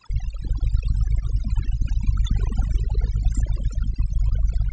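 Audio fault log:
Throughout: overdone noise removal. A noise reduction stage was pushed too hard on this speech. Frequency bands near the noise estimate are pulled down or shut off, and quiet parts of the voice vanish with them. The background drops and breaks up into twinkling specks.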